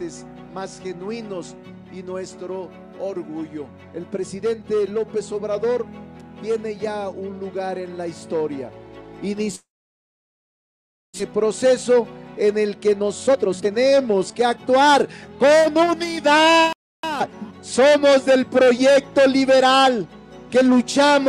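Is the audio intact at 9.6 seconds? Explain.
No. From 9.55 to 11.22 s there is a long network dropout. The last sound is drawn out into a fading buzz, then nearly 1.5 s of silence, and playback resumes with about a second of material skipped and the timing shifted by roughly half a second. The likely cause is a stall in arriving audio that the receiver could only mask briefly. Unlike a short packet-loss glitch, the concealment runs out, leaving an audible hole.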